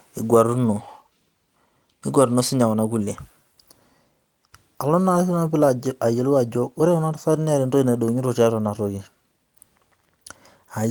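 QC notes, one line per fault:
8.65–8.67 s, lost packet rebuilt from error correction: a packet went missing right after "entoki naidogito tiatua", and the decoder filled its slot with the low-bitrate copy carried in the next packet. There is no gap, but this 20 ms stretch of speech sounds briefly rougher and noisier, consistent with a single lost packet.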